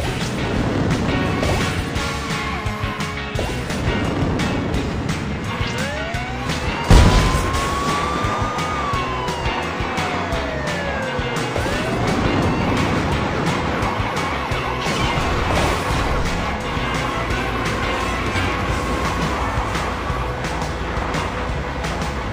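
No technical faults are audible.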